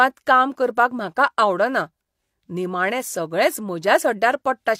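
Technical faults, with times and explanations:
Nothing technical stands out in this speech recording: no dropouts, glitches or other faults turn up anywhere along the way.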